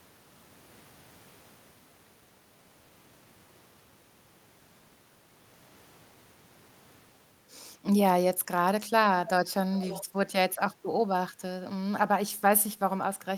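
The far end's echo canceller, likely running against a loudspeaker playback, failed to fully subtract what its microphone picked up, so part of the returning signal was sent back down the line. From 9.74 to 10.04 s this echo leak is heard as a faint, delayed copy of the speech trailing it by 306 ms, sitting well below the direct speech at roughly 15 dB down.

Right after that, the same canceller clamped down on the microphone while the loudspeaker was active, causing background gated by the echo canceller. From 10.04 to 10.16 s the room sound is pushed down by up to about 8 dB for roughly a tenth of a second. It is heard as a brief dip in the ambience that fills back in once the canceller releases.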